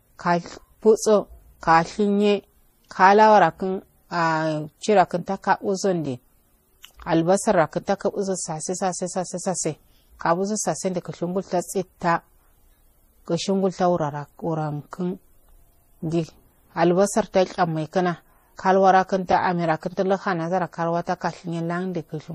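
Transcoding between lossy codecs runs through the whole speech clip. Nothing above 15.2 kHz, with two different layers of smeared, swirly artefacts, likely from low-bitrate MP3 around 40 kbit/s re-encoded to Vorbis near 37 kbit/s, which spends bits re-coding the first codec's damage.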